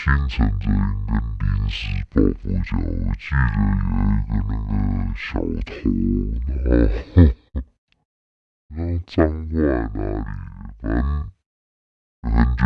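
From start to finish the speech drags at half speed and sits an octave low, a wrong sample rate fault consistent with 48 kHz audio played back at 24 kHz.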